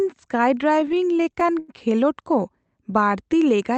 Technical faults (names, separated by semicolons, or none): repeated stalls (stutter); jitter buffer slow-down